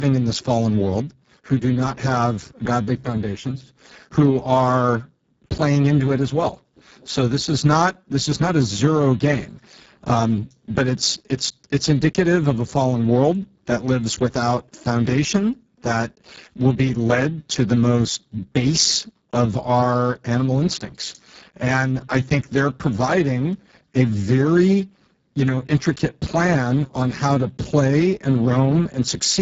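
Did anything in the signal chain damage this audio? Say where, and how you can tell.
Yes. Throughout, the speech is hoarse, noisy and near-robotic. That is Speex codec damage: CELP excitation starved at a bitrate near 6 kbps.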